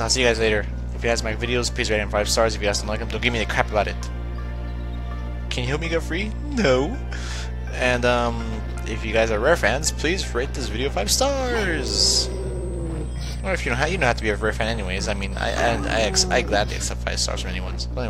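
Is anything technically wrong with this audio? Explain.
Yes. From 11.53 to 16.27 s a thin, high whistle sits over the sound. It drifts between about 8.02 and 8.26 kHz, roughly 30 dB below the main signal. This is switching supply whistle: a switching power supply has dropped into a burst mode slow enough to fall within hearing, or is beating against another supply. Its pitch wanders as the load it feeds shifts.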